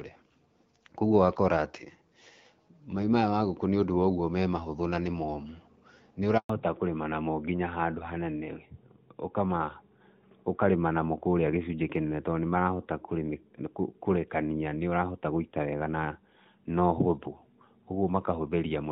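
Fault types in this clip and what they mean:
Handover gap: While the call switched from one network to another, no speech frames arrived. The sound fades out within a few tens of milliseconds at 6.38 s and stays silent for 120 ms until the new link starts at 6.50 s. Unlike a random packet-loss dropout, it happens once, is followed by true silence rather than smeared or repeated fragments, and marks the point where the audio's character changes.
Fallback to narrowband: At 6.50 s, immediately after the gap, the call leaves HD Voice. Before the switch, AMR-WB at 12.65 kbit/s carries content up to about 6.4 kHz, with a little noise-shaped air above that. From 6.50 s to the end, nothing remains above 4 kHz, which fits AMR-NB at 12.2 kbit/s, and the speech turns duller and rougher. A plain low-pass filter would leave the texture smooth, but here the cut comes with a codec change.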